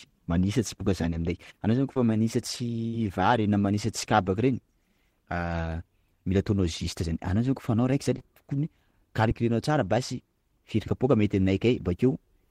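Right after "aminay anao zany", around 1.94 to 1.97 s, there's a short concealed packet loss: about 20 ms never arrived, so the decoder extended the preceding sound to cover it, leaving a quick smear. At 2.88 to 2.94 s a burst of packet loss takes out about 50 ms; the fill is a fading stretch of the last sound before the speech picks up again further along. More short concealed losses follow: 4.04 s after "na manisatry", 8.18 to 8.21 s, and 9.29 s just before "tsara basy firy". Each is a brief smear or wobble.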